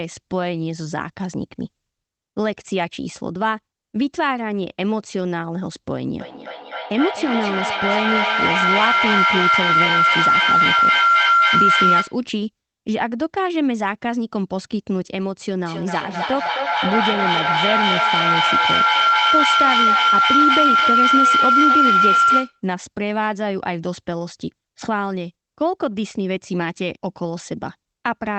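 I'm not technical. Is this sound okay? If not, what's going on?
No. At 6.2–12.3 s and 15.7–22.7 s, a loud whistle near 1.5 kHz pulses about three times a second. This is feedback howl: two call devices in one room keep re-amplifying each other.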